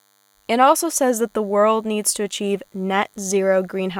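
A thin, steady buzz runs under the speech for the whole clip. This is DECT cordless phone buzz. A nearby DECT handset or base sends radio bursts 100 times a second. The audio circuit rectifies them into a 100 Hz tone rich in harmonics, sitting roughly 40 dB below the speech.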